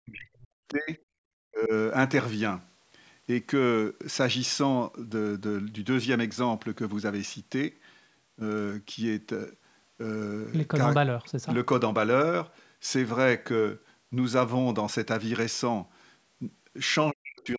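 From 0 to 0.98 s, 1.5 to 1.72 s and 17.11 s to the end, the speech dips hard, up to about 40 dB. That's likely speech suppressed in double talk.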